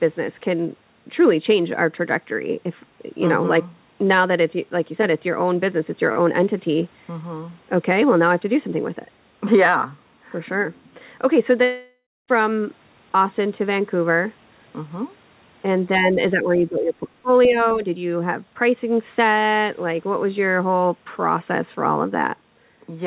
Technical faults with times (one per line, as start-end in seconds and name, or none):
11.64-12.30 long network dropout
15.87-17.84 speech suppressed in double talk
17.44-17.49 other side's voice leaking through